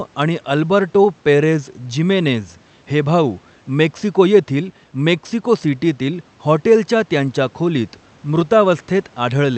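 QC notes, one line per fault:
The speech sits well clear of a room background about 35 dB below it, and the call path leaves its top end stopping near 8 kHz, with coding that fits an Opus stream at around 48 kbps.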